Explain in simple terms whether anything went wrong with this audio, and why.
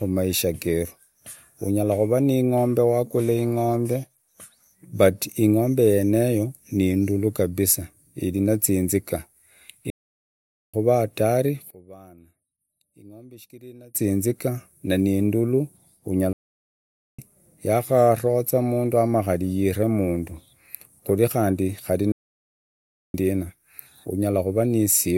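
A couple of things go wrong here. One is a playback stall, three times: the speech just cuts out mid-flow and goes silent, from 9.9 to 10.74 s (under a second), from 16.33 to 17.19 s (just before "yaharoza mundu"), and from 22.12 to 23.14 s (about a second). That pattern suggests the player likely ran dry of audio data, or got held up, and simply paused until it could carry on.

The other one is one channel inverted, from 11.71 to 13.95 s. There the speech suddenly drops away to a faint version of itself, then comes back. That fits one of the two stereo sides being flipped upside down electrically, so when the two sides get combined, the parts they share cancel each other out. Whatever both sides carry, background included, nearly disappears.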